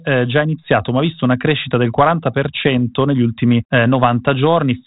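At 2.76 to 2.78 s, the speech has bit errors on an ADPCM link. The sound at 32 kbit/s is band-limited below 4 kHz, as G.726 ADPCM is, with only light coding roughness. Here a short burst of flipped bits reaches the decoder. The error rate is tiny, a few hundredths of a percent. Each wrong bit also knocks the decoder's step size and predictor off track. The damage rings on briefly. It is heard as a pop and a rough crackle, with a quick jump in level.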